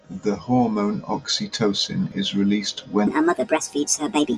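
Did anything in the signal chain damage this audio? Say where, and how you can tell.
Yes. From 3.07 s to the end at 4.37 s, the speech abruptly turns high and hurried, as if someone pressed fast-forward: it runs at 1.51 times normal speed and its pitch rises by roughly seven semitones at the same instant. This section at the wrong speed most likely comes from playback or editing at a sample-rate or clock mismatch, where that stretch is read out on a faster clock than it was recorded with, so speed and pitch shift together.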